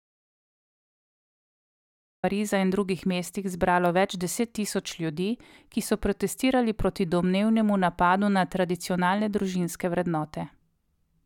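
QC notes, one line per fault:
0.00–2.24 s, audio dropout to silence: the clip opens already silent, with no room tone, then speech comes in mid-flow, likely because the input link or device was lost. The waveform is a dead-flat line there, and the spectrogram is blank before it.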